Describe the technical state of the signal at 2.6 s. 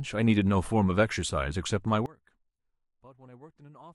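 From 2.06 s to the end the speech falls about 25 dB to a faint residue, likely one channel inverted cancelling the shared centre.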